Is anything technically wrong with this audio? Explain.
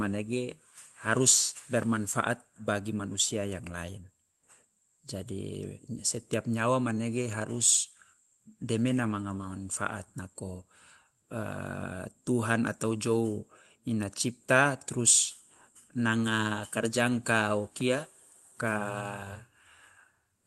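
Yes. At 17.81 s a single sharp snap cuts across the speech, lasting only a few milliseconds and sitting on top of the sound rather than replacing it. This is an electrical switching spike: a nearby switch, motor or static discharge likely arced, and the audio line picked up that brief burst of energy as a click. The call path through the Opus codec, with its top end cut off at 12 kHz, isn't part of this fault.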